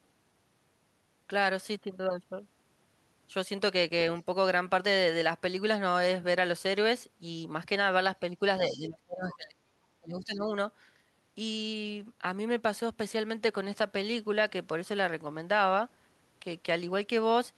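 A speech clip with speech suppressed in double talk from 8.69 to 9.59 s and again from 10.0 to 10.47 s. The level falls steeply, by about 30 dB and then about 25 dB, likely because an echo canceller ducked the talker while the far side spoke. On a waveform these show as sudden pinched gaps, and a spectrogram shows the upper bands thinning out. At 8.71 to 8.79 s the other side's voice leaks through, a fragment about 20 dB below the speech. It is likely residual loudspeaker echo that the canceller missed, and it appears as a faint, separate harmonic trace under the gap.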